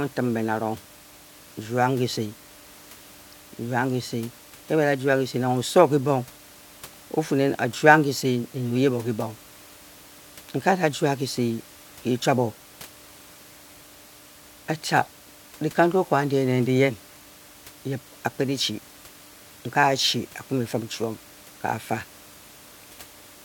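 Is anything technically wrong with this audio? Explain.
No, nothing technically wrong is audible in this speech; the only thing beneath it is the room's own background noise, sitting about 24 dB below the speech and belonging to the recording itself.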